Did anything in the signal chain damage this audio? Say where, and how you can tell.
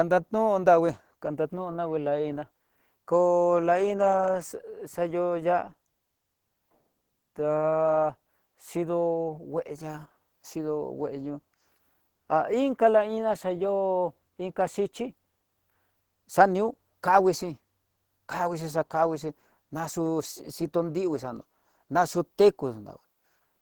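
Yes, at the codec stage, and the damage is plainly audible from start to finish: the speech is muffled and hoarse, with a rough, grainy texture rather than MP3-style swirling, while content still extends to about 20.1 kHz. That pattern is likely Opus compression in its hybrid mode, where a speech coder carries the lower band and the upper band is rebuilt from coarse energy and noise fill. The plainly audible coarseness fits a low bitrate around 16 kbps.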